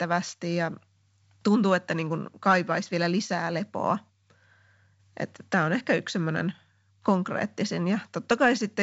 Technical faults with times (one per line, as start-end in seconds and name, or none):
none